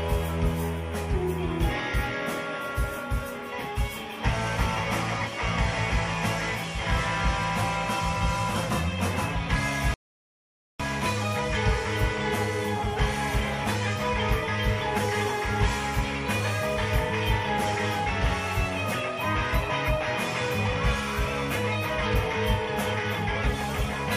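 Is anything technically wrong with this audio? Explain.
Yes. At 9.94 s the sound drops to complete silence and stays silent until 10.80 s, a rebuffering stall. Playback used up its downloaded audio and paused until more data arrived, then carried on from exactly the point where it stopped. Nothing is skipped, but about 0.86 s of dead air is inserted. On a waveform this shows as a flat line; on a spectrogram it is a sharp-edged blank vertical band across all frequencies.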